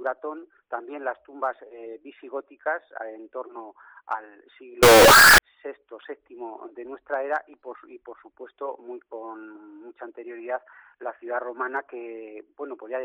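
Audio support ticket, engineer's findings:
Float read as integer, 4.83 to 5.38 s. Sudden very loud, harsh burst, waveform near-square at an almost fixed, high level regardless of source level; background noise as loud as the foreground, pitch still traceable. Likely cause: 32-bit float samples read as 32-bit integer, sign and exponent bits driving amplitude. Check the format flag in the decode or conversion stage.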